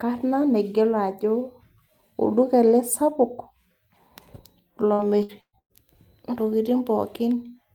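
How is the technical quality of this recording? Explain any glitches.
The recording has one clear glitch, repeated packet loss (robotic sound), from 4.93 to 5.73 s. Four holes in quick succession, the longest 117 ms, are patched by stretching the preceding sound, so about 43% of that stretch is filled-in audio. The speech turns choppy, with pieces missing. Unlike a single dropout, the gaps recur close together, giving a stuttering, choppy texture rather than one clean break.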